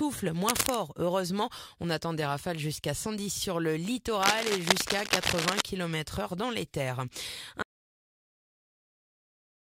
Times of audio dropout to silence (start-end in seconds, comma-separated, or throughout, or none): 7.62-9.72